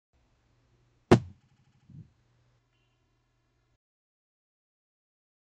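From 1.40 to 1.87 s there's repeated frames: a 78.4 ms chunk replays six extra times, so you hear a stutter that adds 470 ms. From 2.59 s to the end, channel delay (comb filtering) kicks in: one side lags about 3 ms, and summing to mono carves notches from around 150 Hz up, sounding hollow and phasey.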